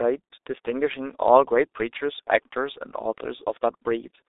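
Throughout, the speech carries heavy G.723.1 codec damage. The sound is confined to a telephone band of roughly 300 Hz to 3.7 kHz, with nothing above 3.8 kHz, so it is muffled. The slow, coarse voice modelling, consistent with about 6.3 kbit/s, leaves it hoarse, with smeared consonants.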